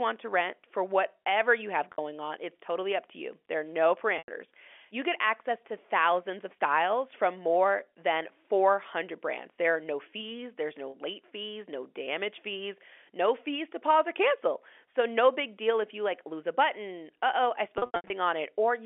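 Packet loss with pitch repetition: lost packets were bridged by replaying the last pitch period. At 1.92 s (60 ms) and 10.90 s (40 ms) this gives a held, buzzy sound; at 4.18 s (100 ms) it fades into silence and the speech returns with a short cross-fade; from 17.78 to 18.10 s, 220 ms of scattered gaps stutter through the telephone-band speech.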